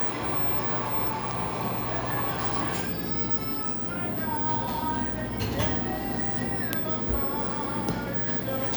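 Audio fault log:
No faults can be heard anywhere in this recording.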